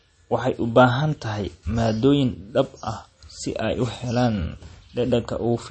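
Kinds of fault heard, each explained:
MP3 compression: throughout the speech, nothing sounds above 8.4 kHz and a watery, swirling texture is plainly audible, likely from an MP3 encoder starved of bits, fitting about 32 kbps, which cuts the treble and switches weak frequency lines on and off between frames.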